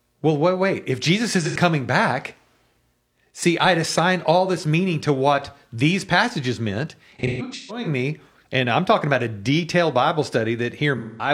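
AAC frame loss with concealment occurs three times in this speech, with the decoder rebuilding the missing audio from the last good spectrum. From 1.46 to 1.56 s about 85 ms is lost, which fits two frames, and it leaves a brief smeared, phasey patch. From 7.18 to 7.87 s about 430 ms of loss is scattered across roughly 680 ms, with the longest gap around 150 ms, so the speech repeatedly turns noisy and blurred. From 10.97 to 11.30 s about 210 ms is concealed.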